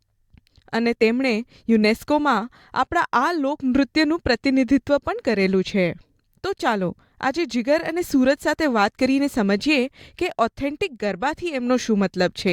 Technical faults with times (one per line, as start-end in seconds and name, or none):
none